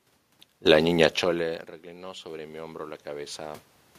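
From 1.83 s to 3.68 s there is automatic gain rising: after the input dropped by about 24 dB, the gain control raised its gain by about 7 dB gradually, so speech and room noise swell together.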